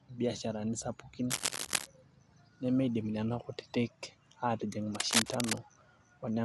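Cable scratch noise in this speech recording, from 1.30 to 1.87 s just after "biasharani sapukin" and again from 4.95 to 5.59 s, is dense, uneven scratching roughly as loud as the speech itself, likely from a worn cable or connector being moved so its contact resistance fluctuated.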